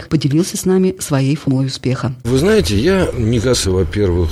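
The audio has two short bursts of damaged data in a compressed stream, at about 1.47 s and from 3.53 to 3.55 s. Corrupted bytes make the decoder misread frames and lose sync, giving a brief glitch.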